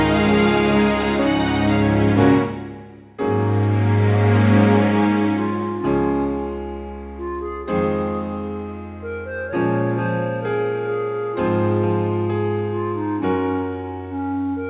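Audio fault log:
No faults heard.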